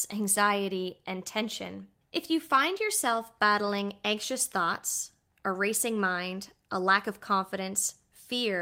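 Nothing stood out as a technical fault on listening to this speech recording.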